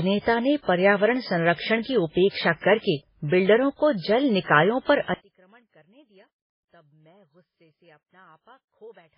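From the first moment to the end, the speech carries heavy MP3 compression damage, likely from a very low bitrate around 16 kbps. Nothing reaches above 5.3 kHz, so it sounds dull and watery, with swirly, chirpy artefacts on sibilants and smeared consonant attacks.

Right after "निकायों पर", at 5.14 s, the level drops by about 35 dB and stays down through the end at 9.18 s. This points to one channel inverted, likely cancelling the shared content when summed to mono, leaving only a faint residue.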